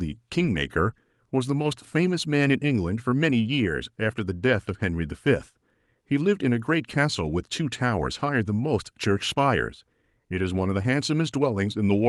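No technical faults can be heard anywhere in the recording, and the signal stays steady and intact throughout.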